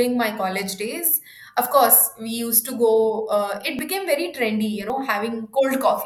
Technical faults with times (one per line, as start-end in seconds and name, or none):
3.79 dropped buffer (overrun)
4.90 dropped buffer (overrun)